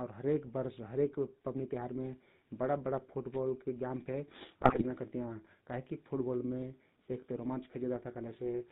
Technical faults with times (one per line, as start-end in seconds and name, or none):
0.00-8.72 GSM full-rate codec
4.62-4.83 GSM bit errors